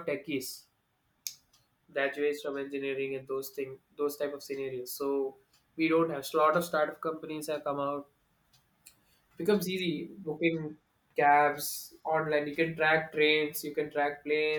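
Nothing in the speech stood out as a technical problem on listening.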